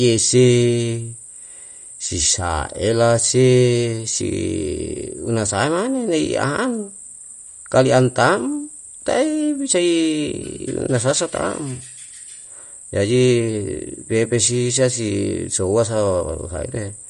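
From start to end, likely MP3 compression near 48 kbps: treble stops at 11.2 kHz, and s sounds turn watery and swirly, unlike plain low-pass filtering.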